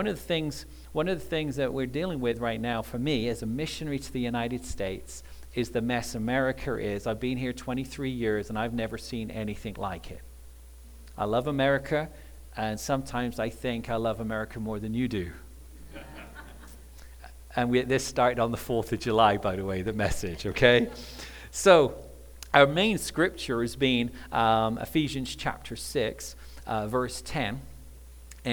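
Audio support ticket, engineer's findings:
No faults found on listening; nothing to action.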